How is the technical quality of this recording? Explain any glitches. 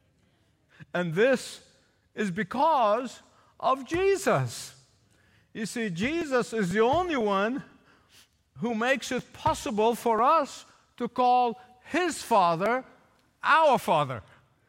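The recording has one audible problem, periodic USB or driver dropouts, from 6.22 s to 13.15 s. About every 0.50 s, a few milliseconds of speech are skipped as something stalls the audio path, leaving regular ticks. Their clockwork spacing, audible only while speech plays, distinguishes them from random network packet loss.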